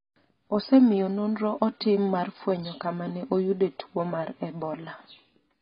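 From start to finish the speech is dull and band-limited, with nothing above 5 kHz, and heavy, smeared coding damage: likely AAC compression at a very low bitrate, around 16 kbps. A spectrogram shows a flat ceiling at 5 kHz with patchy, hole-ridden energy beneath.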